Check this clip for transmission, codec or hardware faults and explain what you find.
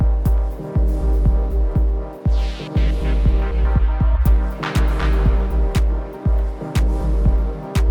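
Nothing in the clip points to a transmission, codec or hardware problem. No dropouts, distortion or other disturbances can be heard anywhere in it.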